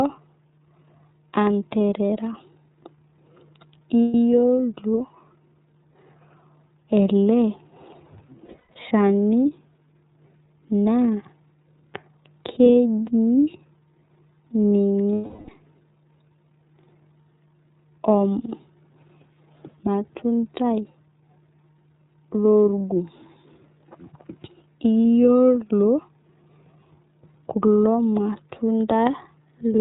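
iLBC codec coding runs through the whole speech recording, plainly audible: nothing above 4 kHz, and a slightly rough, synthetic edge that fits its 13.33 kbps, 30 ms-frame mode. Lost iLBC frames occur at 4.02–4.14 s (120 ms), 8.46–8.77 s (210 ms lost in pieces, longest about a tenth of a second), 12.72 s, 15.16–15.50 s (330 ms) and 25.01 s. The decoder fills each gap by repeating the last pitch cycle with noise, heard as a held, buzzy vowel, before the voice returns almost at once.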